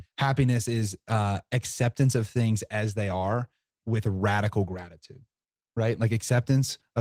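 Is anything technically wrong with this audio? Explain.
Yes. Throughout the speech, Opus voice compression in hybrid mode codes the excitation coarsely, which fits a low bitrate around 16 kbps, leaving it plainly hoarse and slightly robotic.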